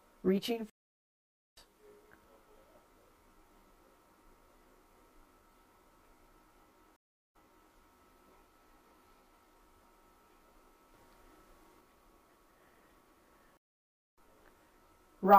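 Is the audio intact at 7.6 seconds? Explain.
No. From 6.96 to 7.72 s the sound cuts out for 0.37 s, then resumes 0.39 s earlier, repeating what was just heard. This is a stream reconnect: the connection dropped, the player reconnected with a fresh decoder, and the server resent a burst.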